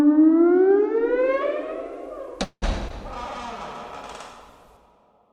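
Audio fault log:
2.43–2.64 s, call audio freeze: the sound stalls for about 0.2 s. The receiver carries the last moment of sound forward as a fading buzz for roughly 185 ms, ending in a short silence of about 60 ms, then picks up exactly where it left off. Nothing is skipped; the audio simply arrives later than before, by about 185 ms. That inserted pause, with no content lost, separates it from packet loss. A late-arriving packet stream is the likely cause.
2.88–2.92 s, short concealed packet loss: about 36 ms of sound is affected. Roughly 20 ms of audio never reached the decoder, and the receiver patched it by extending the preceding sound for about 16 ms before blending back into real audio. It comes across as a brief smear or wobble. Unlike the freeze, the timing does not shift and material is actually missing rather than delayed, so the hole is covered over instead of opened up.
3.10–4.73 s, call bitrate drop: the encoder's rate falls from 96 kbps to 28 kbps, staying at that lowest level for about 1.56 s. 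Coarser coding at this rate makes the sound rough and watery, and the top end is trimmed so it turns duller. Unlike the two brief events before it, this is a sustained change in texture rather than a gap or blip, and it lasts until the rate climbs back.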